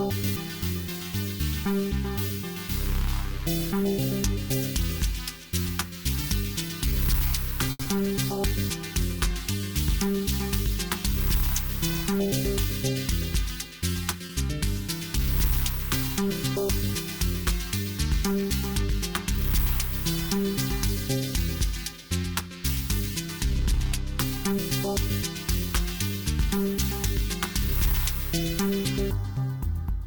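At 7.71 s a packet arrives late and the sound stalls briefly. The jitter buffer ran dry, so the receiver held the last sound for about 80 ms. Playback then resumes where it paused. Nothing is lost, but that moment drags, with a faint buzz or dip.

From 7.83 to 7.87 s comes a short concealed packet loss. About 60 ms of audio never arrived. The receiver patched 20 ms by extending the preceding sound, then blended back in. This cuts the delay by roughly 40 ms. It is heard as a quick smear or wobble.

A jitter buffer slow-down follows, from 7.96 to 9.60 s. The receiver repeated tiny pitch periods to rebuild its reserve, adding 40 ms. Playback runs at 98% speed with unchanged pitch. The sound feels slightly drawn out.

From 12.13 to 14.16 s there is a jitter buffer speed-up. Too much audio had piled up, so short pieces were trimmed repeatedly, roughly 70 ms in all. The sound runs about 3% fast at the same pitch.

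At 14.26 s another short stall from a late packet occurs. The buffer emptied again, and the last sound was stretched for about 30 ms before playback continued. There is a brief hold, with nothing missing.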